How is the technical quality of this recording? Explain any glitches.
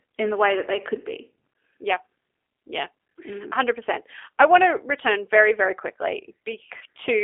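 The speech is intelligible but audibly compressed, with one short dropout near the end.

Throughout, the speech has the slightly rough, synthetic quality of the G.729 codec, and the line is confined to roughly 200 Hz to 3.5 kHz, so sibilants and breath detail are missing. The codec damage is plainly audible, which fits an 8 kbit/s G.729A stream. The decoder doesn't send the waveform itself. It rebuilds each short frame from a vocal tract filter, a pitch predictor and a few pulses, which leaves a coarse, buzzy texture.

From 6.79 to 6.83 s, the sound briefly smears into a weak, fading continuation and then recovers. This is VoIP packet loss concealed by the speech codec, and the roughly 20 ms gap fits two lost 10 ms frames. With no packets arriving, the decoder kept extending its last pitch and filter while turning the gain down. Because each frame builds on the one before, the sound stays weak or distorted for a moment after data resumes.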